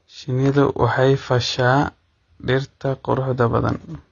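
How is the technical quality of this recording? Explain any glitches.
The recording has two clear technical faults: low-bitrate codec damage across the whole speech clip, and a brief burst of crackle near the start.

AAC compression runs throughout. Nothing is present above about 6.9 kHz, so the speech sounds dull and muffled, with a smeared, warbling texture on sustained sounds and sibilants. This is likely AAC-LC coding at a low rate, consistent with roughly 24 kbps: the encoder lowers its cut-off and coarsely quantises the remaining spectrum, discarding detail it judges least audible.

Loose connector crackle occurs from 0.46 to 0.57 s, just before "waxay fasha". For about a tenth of a second the audio breaks into irregular scratching and crackle. A worn or dirty contact was making and breaking rapidly as it shifted, chopping the signal on and off.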